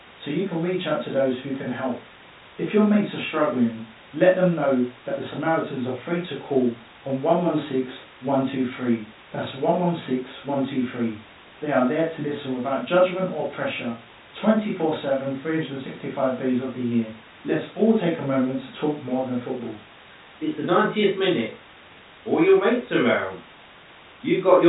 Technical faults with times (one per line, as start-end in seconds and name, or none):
none